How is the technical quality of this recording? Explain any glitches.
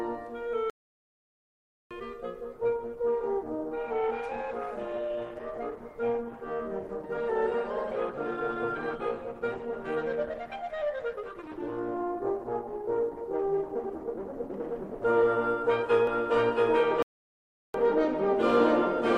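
The music has several clear faults: two dropouts, a long stretch of degraded quality, and a doubled track at the end.

Playback stall, 0.70 to 1.91 s and 17.02 to 17.74 s: the music falls silent for 1.21 s and 0.72 s, likely because the player ran short of data. A waveform shows flat gaps.

Adaptive stream at a lower bitrate, 2.53 to 14.53 s: codec artefacts rise with no gap, which fits a switch from Opus at 64 kbit/s to 16 kbit/s.

Doubled audio track, 16.07 s to the end: a second full-band copy, at roughly the same level and about 0.7 s behind, starts abruptly. This is likely a second capture path. A spectrogram shows repeated patterns offset in time.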